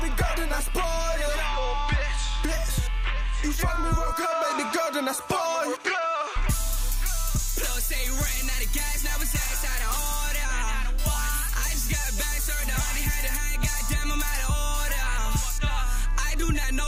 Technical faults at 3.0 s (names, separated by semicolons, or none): none